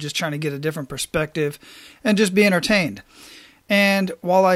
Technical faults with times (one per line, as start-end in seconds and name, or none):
none